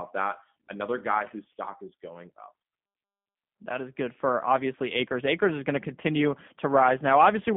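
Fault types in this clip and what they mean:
G.729 codec: the speech went through a model-based codec that rebuilds each frame from a vocal tract filter and a few pulses, which fits G.729 at 8 kbit/s. The sound sits within 150 Hz to 3.5 kHz, nothing above 3.6 kHz, with a plainly rough, synthetic edge.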